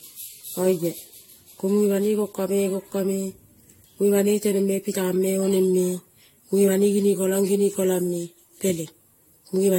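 From start to finish the speech sounds swirly, smeared and hollow, with blurred consonant attacks and nothing above 16.6 kHz. This is likely generation loss: repeated decoding and re-encoding, around five passes, through AAC-LC at 64 kbit/s, each pass adding fresh quantisation noise and spectral holes.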